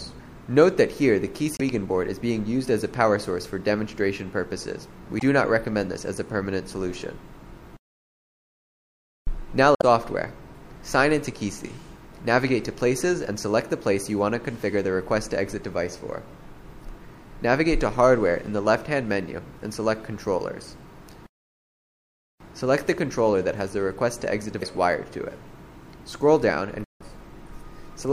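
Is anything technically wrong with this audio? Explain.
Yes, there's damaged data in the compressed stream, showing up five times: 1.56 to 1.62 s, 5.17 to 5.22 s, 9.75 to 9.83 s, 24.58 to 24.63 s, and 26.83 to 27.02 s, the last being the longest at roughly 0.19 s. Part of the encoded data there was wrong, so the decoder misread or rejected those frames, lost sync and had to hunt for the next valid frame header. Each spot breaks the audio with a short disruption, such as a chirp, squawk, click or brief hole.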